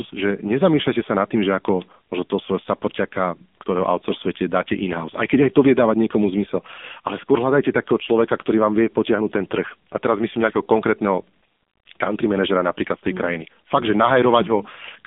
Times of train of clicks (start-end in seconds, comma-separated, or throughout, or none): none